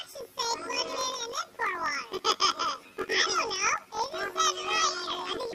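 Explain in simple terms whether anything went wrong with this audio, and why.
Planar audio read as interleaved, throughout: each 21.77 ms block replays twice at double speed, an octave up, causing a robotic buzz at 45.9 Hz.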